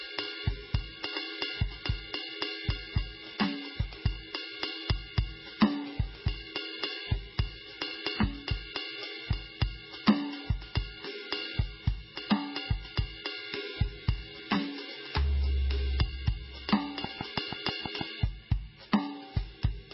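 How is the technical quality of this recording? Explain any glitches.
The technical quality is poor. The music carries heavy codec damage from start to finish, and a short burst of clicks appears near the end.

MP3 compression runs throughout. Nothing reaches above 5.6 kHz, and the heavy damage likely comes from MP3 encoding at a very low bitrate, around 16 kbps. Starved of bits, the encoder drops weak frequency lines, which flicker between frames. The result is dull, watery and swirly, with smeared attacks.

A train of clicks runs from 17.04 to 18.02 s. About seven regular pulses arrive at 6.2 per second, each standing roughly 15 dB above the music. They sound like a steady ticking laid over the sound, and pulses of this kind often come from interference or a faulty connection.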